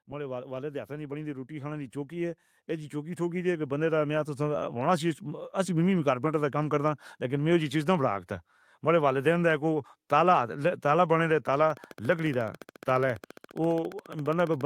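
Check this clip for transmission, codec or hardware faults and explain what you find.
Two faults are audible. From 0.05 to 5.21 s there is automatic gain rising. The control judged the input too quiet and raised gain by about 13 dB, so speech and background swell together.

From 11.70 s to the end, a train of clicks ticks regularly, 14.5 per second, a little louder than the speech and through pauses too. The likely cause is nearby interference or a faulty connection or power supply.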